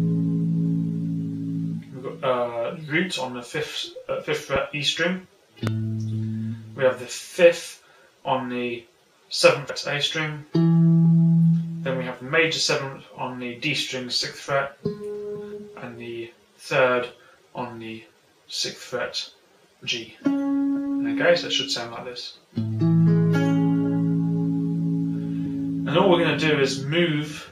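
Two loud pops land at 4.56 to 4.58 s and 5.67 to 5.69 s, single sharp clicks peaking roughly 10 dB and 15 dB above the sound, which continues beneath them. A brief voltage spike, likely from a plug, switch or static discharge, was added to the signal.

Damaged data in a compressed stream appears at 9.69 s, 15.51 s and 25.45 s as short glitches. Corrupted bytes made the decoder misread those frames, lose sync and jump ahead to the next valid frame header.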